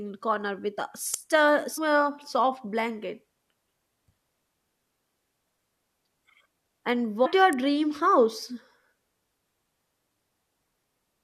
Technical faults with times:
1.14 electrical switching spike
1.77 damaged data in a compressed stream
3.46 damaged data in a compressed stream
7.25 damaged data in a compressed stream
7.53 electrical switching spike

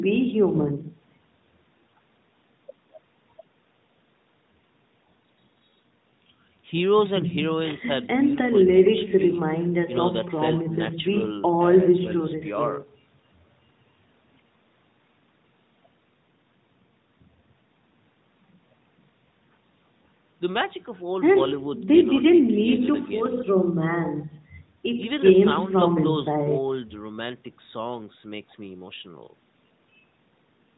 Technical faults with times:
none

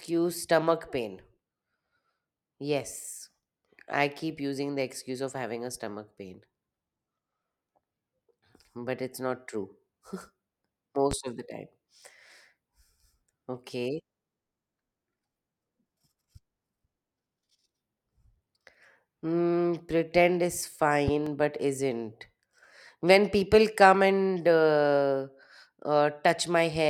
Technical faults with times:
11.11-11.14 loud pop
21.08-21.30 loud pop

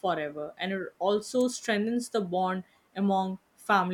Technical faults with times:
1.41 electrical switching spike

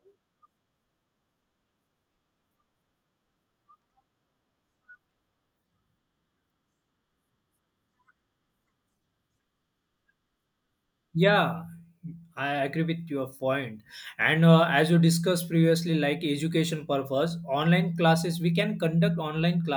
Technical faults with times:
none

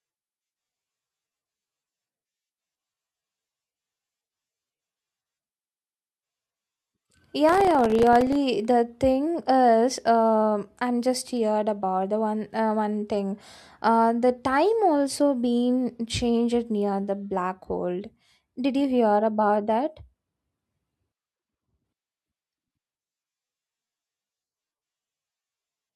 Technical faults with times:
7.49-8.35 processor overload crackle

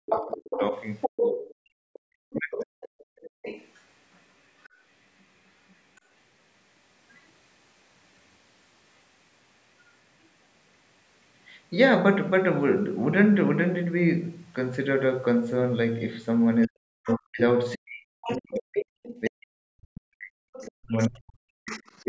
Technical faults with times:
0.00-2.70 speech suppressed in double talk
0.11-6.01 other side's voice leaking through
2.98-3.42 background gated by the echo canceller
16.67-22.08 speech suppressed in double talk
17.09-19.30 other side's voice leaking through
20.55-22.05 other side's voice leaking through

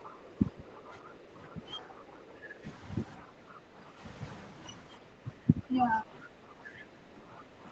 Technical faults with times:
0.00-2.65 speech suppressed in double talk
0.04-0.09 other side's voice leaking through
0.75-0.81 other side's voice leaking through
1.09-1.13 other side's voice leaking through
1.78-2.04 other side's voice leaking through
2.40-2.55 other side's voice leaking through
3.26-4.01 speech suppressed in double talk
4.97-7.71 speech suppressed in double talk

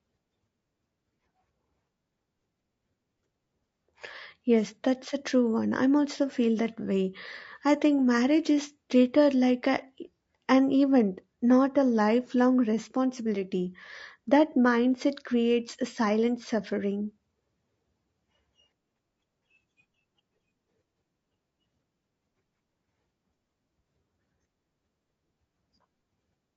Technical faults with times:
0.00-26.56 low-delay AAC compression

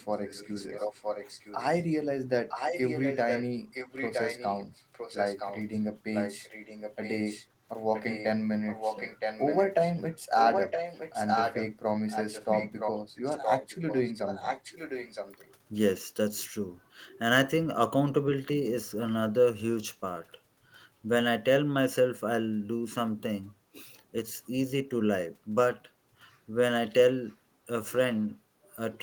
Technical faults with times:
0.12-1.84 echo leak
2.48-15.50 echo leak
27.29-27.35 echo leak

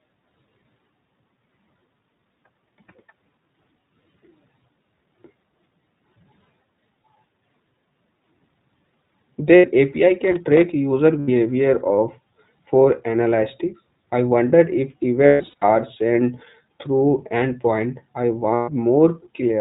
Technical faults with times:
0.00-19.60 iLBC codec
7.03 lost iLBC frames
9.56-9.66 lost iLBC frames
10.24-10.63 loose connector crackle
11.20-11.29 lost iLBC frames
15.26-15.64 lost iLBC frames
18.54-18.70 lost iLBC frames

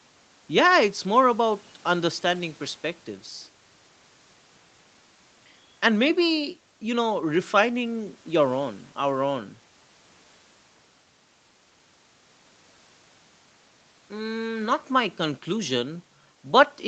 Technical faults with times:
none

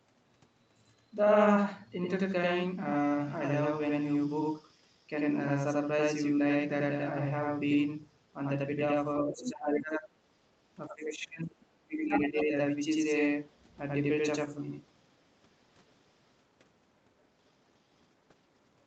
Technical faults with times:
0.00-18.86 channel delay (doubling)
9.24-10.14 speech suppressed in double talk
9.45-9.51 other side's voice leaking through
10.88-12.55 speech suppressed in double talk
12.08-12.45 other side's voice leaking through
13.53-13.58 other side's voice leaking through
17.20-17.27 other side's voice leaking through

